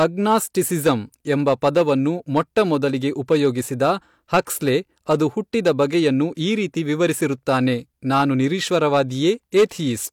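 Right through the recording, the speech has hard clipping. The level going into some stage was about 7 dB hotter than it could pass, so the loudest peaks got sliced flat, and roughly one percent of the samples went over that limit. Those squared-off tops throw extra harmonics high up the spectrum, so you hear a gritty crackle riding on the louder syllables rather than a constant fuzz, since only the peaks are hitting the limit.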